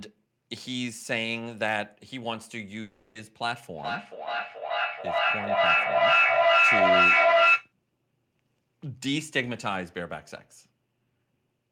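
A long network dropout interrupts this speech recording from 2.81 to 3.17 s, likely caused by packets failing to arrive. For about 0.34 s the receiver stretches the last sound into a fading buzz instead of going silent, and the audio resumes without the lost portion. Feedback echo between two devices follows from 3.73 to 7.73 s. One device replays what the other's microphone sent, and that microphone picks it up again, beyond the reach of either echo canceller. The sound returns roughly every 0.4 s, growing thinner and more ringing, and the repeats pile up to about 11 dB above the speech.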